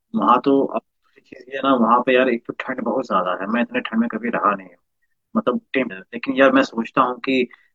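At 5.86 s, running to about 5.91 s, the speech is interrupted by damaged data in a compressed stream. For roughly 50 ms the decoder is fed corrupted frames, misreads them, loses sync and has to hunt for the next valid frame header before normal decoding resumes. The result is a short chirp, squawk, click or hole in place of the speech.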